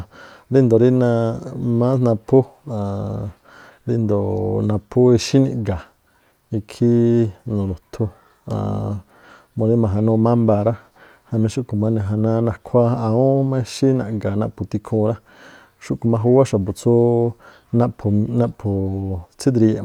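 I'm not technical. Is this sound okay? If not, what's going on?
No, not quite. At about 16.05 s there is a very brief hitch in the speech, a tiny flat spot lasting well under a thousandth of a second (0.67 ms), which you may hear as a faint tick or not at all. This is an underrun with held sample: the playback system briefly ran out of audio to send, so it held the last level steady until more arrived. Nothing appears to have been lost, since the speech picks up exactly where it paused.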